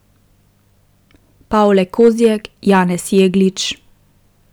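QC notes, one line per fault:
1.65–2.26 s, 2.69–2.81 s, 3.17–3.23 s: hard clipping. Speech peaks overdriven by about 3 dB (about 2 dB last) are sliced flat, giving crisp crackle, not soft saturation's warm rounding.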